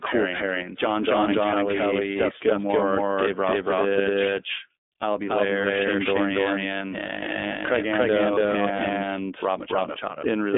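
From start to finish the speech carries a doubled audio track. A second full-band copy trails the first by roughly 0.3 s at about the same level, with no reverberant tail or room colouring. The likely cause is the signal being captured again through a slower path.

Also present throughout is iLBC codec damage. The line band runs from 250 Hz to 3.6 kHz, and nothing passes above 3.8 kHz. Each 30 ms frame's excitation is coded independently, which fits the 13.33 kbps mode and plainly leaves the speech rough and somewhat synthetic.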